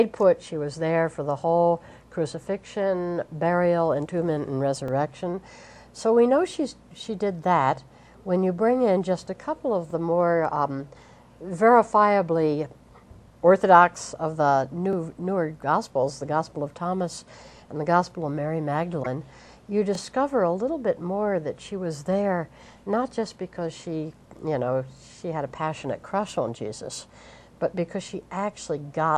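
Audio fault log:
4.88, 9.91, 14.93, 19.95 and 24.98 s, overlapping chunks: each 5 s chunk starts 23 ms before the previous one ended, so that slice plays twice, giving a regular stutter-click.
14.73 and 25.58 s, corrupt frame decoded: the decoder played a couple of damaged compressed frames, putting energy at wrong frequencies and producing a brief chirpy noise burst.
18.97–19.07 s, compressed frames skipped: frames went unplayed, so the audio jumps ahead by about 30 ms.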